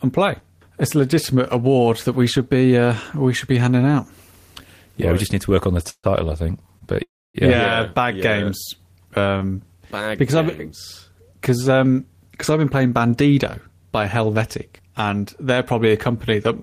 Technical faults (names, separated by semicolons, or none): call audio freeze; short stall from a late packet